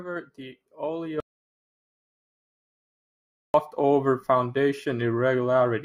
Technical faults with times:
1.20-3.54 audio dropout to silence

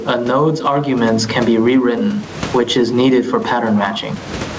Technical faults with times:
0.00-4.58 gain pumping

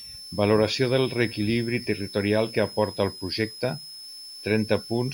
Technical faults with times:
0.00-5.13 switching supply whistle

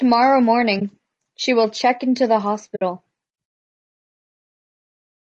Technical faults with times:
0.00-5.23 low-delay AAC compression
0.79-0.82 AAC frame loss with muting
2.75-2.82 AAC frame loss with muting

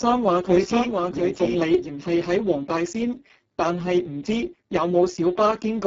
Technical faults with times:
0.00-5.86 Speex codec
0.00-2.04 doubled audio track

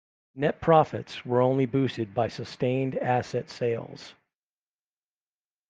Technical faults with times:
none

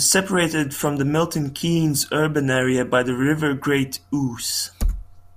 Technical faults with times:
none

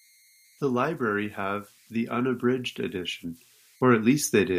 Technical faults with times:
0.00-4.58 converter idle tones

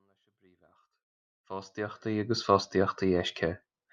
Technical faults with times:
none

